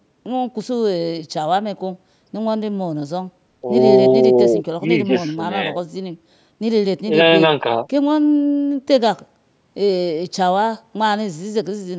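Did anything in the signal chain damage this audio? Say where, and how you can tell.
No, nothing in the chain damaged this speech.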